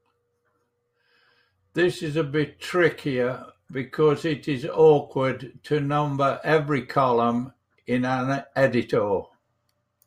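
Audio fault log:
No faults detected in this recording.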